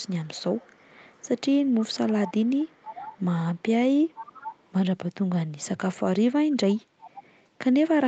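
From 0.00 to 3.25 s a faint delayed copy of the speech trails the original by 480 ms, roughly 20 dB down. It returns briefly at 3.55 to 3.71 s, quieter still, then more strongly at 4.08 to 4.71 s, and once more at 7.00 to 7.22 s. This echo leak is likely a far-end loudspeaker feeding its microphone, with the echo canceller failing to remove all of that pickup before it was sent back.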